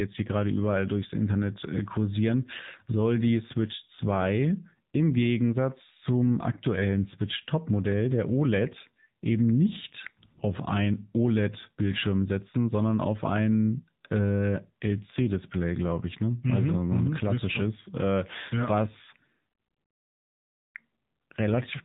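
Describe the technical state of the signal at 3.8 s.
At 3.8 s the speech carries AMR narrowband mobile codec damage, present across the whole clip rather than at this moment alone. The codec samples at 8 kHz, so nothing above 4 kHz survives and the voice sounds muffled and phone-like. Each 20 ms frame rebuilds the voice from a vocal-tract model driven by a few pulses. The damage is plainly audible: a buzzy, synthetic edge that fits a low mode of about 7.4 kbps.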